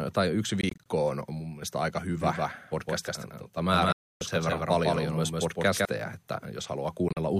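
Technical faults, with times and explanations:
0.61–0.86 s, Bluetooth dropout: right after "tai yksi", about 0.1 s goes missing in short silent chunks up to 20 ms, likely late wireless packets. They show as thin hard-edged blank stripes on the spectrogram.
2.21–5.85 s, doubled audio track: from "on mun mielestä aika", a second copy at roughly equal level trails by around 150 ms, likely an out-of-step duplicate. It begins and ends abruptly. The spectrogram repeats every pattern, with no reverb smear.
3.92–4.21 s, Bluetooth dropout: one solid gap of about 0.28 s where audio likely failed to arrive in time. The waveform flatlines with abrupt edges, and the spectrogram shows a blank column.
7.08–7.19 s, Bluetooth dropout: about 61 ms is lost in broken gaps across 0.1 s, the longest about 41 ms, likely dropped wireless packets. These appear as narrow empty vertical bands.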